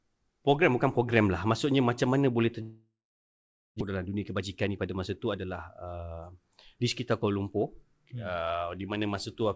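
Speech, heard through a call path that fits G.722 at 64 kbps, with nothing above 8 kHz. From 2.62 to 3.82 s there is a long network dropout, likely. The last sound smears into a fading buzz or hiss, then about 0.83 s of silence. Speech resumes with roughly a second missing. Jitter buffer speed-up follows at 3.90 to 4.87 s and 5.37 to 5.83 s. Speech runs 110% then 107% fast at unchanged pitch, with about 100 ms and 40 ms trimmed.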